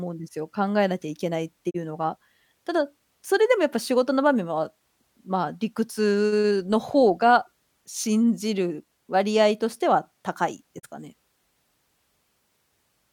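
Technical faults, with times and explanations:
1.69–1.76 s and 10.78–10.85 s, digital broadcast dropout: the speech briefly ducks out to silence twice, each gap lasting about 70 ms with a quick 20 ms fade rather than a hard click. The receiver got a bad or missing frame and muted until clean data returned. The roughly 32 ms of lost audio fits a single dropped frame, and whatever was said in that sliver never comes back.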